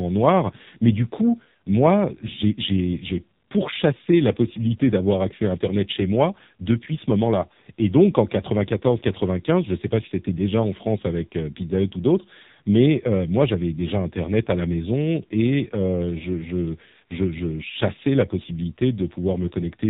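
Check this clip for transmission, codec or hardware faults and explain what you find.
One codec fault runs through the whole clip. AMR narrowband mobile codec, throughout: the speech was squeezed through 8 kHz mobile coding, so nothing above 4 kHz survives, and heavy pulse-model damage leaves it buzzy and synthetic, which fits a low mode near 5.9 kbps.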